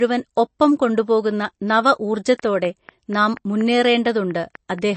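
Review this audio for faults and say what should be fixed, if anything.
The whole clip sounds plainly swirly and watery, and nothing is heard above 8.3 kHz. This is most likely MP3 compression at a low bitrate, which fits something near 32 kbps. When bits run short, the encoder drops weak frequency lines. Those lines flicker in and out between frames, giving the watery texture. The encoder also cuts the treble at a fixed point, which explains the dull top end. To prevent this, keep an uncompressed master or encode at a much higher bitrate.

A train of clicks starts at 2.39 s, just after "ഒപ്പം കൊണ്ടുപോകുന്ന നവ", and runs to 4.80 s. The ticks come at a regular pace of about 4.18 per second, around ten in all. Each one peaks at roughly 5 dB above the speech, so they stand out. The cause is likely a repeating pulse from interference, a faulty connection or a power supply. To prevent this, check cables and grounding, and keep the recording chain away from noisy equipment.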